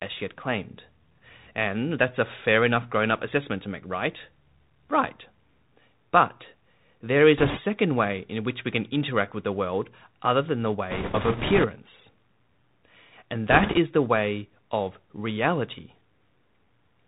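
Throughout, the speech has passed through the Bluetooth CVSD headset codec, which fits a 64 kbps one-bit delta link. Its adaptive step can't keep up with loud high energy, so s sounds turn scratchy, nothing reaches above 4 kHz, and a granular hiss sits underneath.

Bit errors on the Bluetooth voice link, at a few percent, then flip bits in three bursts: 7.38 to 7.60 s, just before "way in which we"; 10.90 to 11.67 s, right after "world other than the"; and 13.50 to 13.78 s, before "the way of reality". Each burst adds a rushing crackle rather than sharp clicks.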